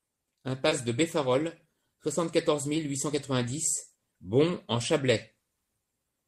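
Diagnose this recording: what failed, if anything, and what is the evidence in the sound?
The network stage failed briefly: short concealed packet loss at 0.69 to 0.73 s. About 20 ms of the speech arrived too late to decode, and the receiver bridged the gap by extending the preceding sound before blending back, leaving a brief smear in the audio.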